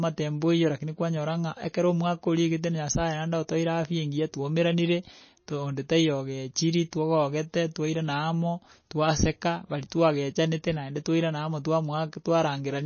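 Throughout, the speech sounds watery and swirly, with nothing above 6.6 kHz. This is likely MP3 compression at a very low bitrate, starving the treble.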